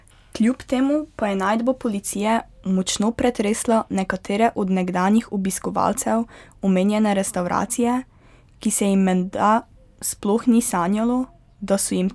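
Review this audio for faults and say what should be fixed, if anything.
Nothing here needs fixing, as no faults turn up anywhere in this speech recording.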